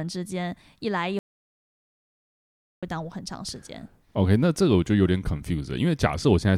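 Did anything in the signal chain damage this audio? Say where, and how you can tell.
Yes: an audio dropout to silence runs from 1.19 to 2.83 s in this speech, about 1.6 s of silence with no room tone, so the speech stops and resumes mid-flow. The input was likely lost at the device or link while the recorder kept writing silence.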